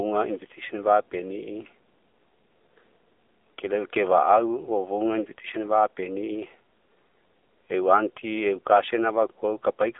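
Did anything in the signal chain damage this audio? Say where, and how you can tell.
Yes. Codec stage: AMR narrowband mobile codec damage is present throughout, with nothing above 3.7 kHz and a buzzy, synthetic speech texture consistent with a low bitrate of about 7.4 kbps.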